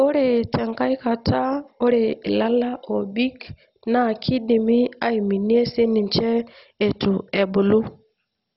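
From start to finish the speech sounds dull and gurgling, with a granular, watery roughness. Nothing is heard above about 5.6 kHz. The top bands drop in and out, so brightness flickers. The likely cause is MP2 compression starved of bits. The codec splits the sound into sub-bands and shuts off the upper ones when bits run short. Those that remain are coarsely quantised. The heavy damage fits a bitrate near 32 kbps.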